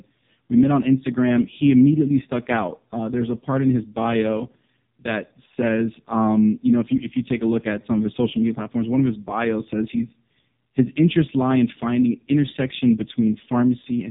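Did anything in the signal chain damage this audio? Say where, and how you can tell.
Yes. Codec stage: AMR narrowband mobile codec throughout. Nothing passes above 3.8 kHz. The heavy, buzzy, synthetic speech fits a pulse-driven vocal-tract model at 4.75 kbps.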